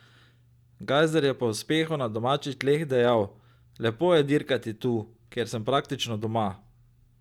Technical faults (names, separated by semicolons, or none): none